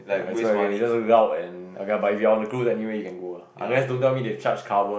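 Listening to this short speech recording, nothing stood out as a technical problem.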